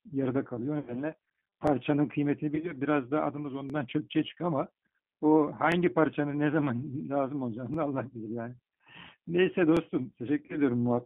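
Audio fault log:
Throughout: G.729 codec. The speech is carried by an 8 kbit/s codec that rebuilds it from a vocal tract filter, a pitch predictor and a few pulses per frame. Only about 150 Hz to 3.4 kHz comes through. The result sounds narrow, rough and plainly synthetic.
0.79 to 0.95 s, 2.55 to 2.73 s, 10.46 to 10.57 s: VoIP packet loss concealed by the speech codec. About 80 ms of audio goes missing in the first gap, 50 ms in the second and 30 ms in the third. The second gap is split into short losses spread over about 80 ms. The decoder stretches its last pitch and filter into a fading buzzy tone or coloured noise. The voice stays weak briefly after packets return.
1.67, 3.70, 5.72, 7.74 and 9.77 s: overlapping chunks. The audio arrives in 2 s chunks. Each chunk begins about 23 ms before the previous one ends. A short slice plays twice at every join. That gives a small stutter or click every two seconds.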